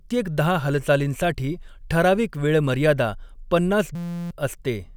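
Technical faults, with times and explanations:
3.95–4.31 s, system hang loop: right after "ठराविक वेळ मर्यादा पन्नास", one 5.8 ms slice, which fits a 256-sample buffer, repeats exactly while the system stalls. This gives a steady 172 Hz buzz rather than a silent dropout, and about 0.4 s of speech is lost.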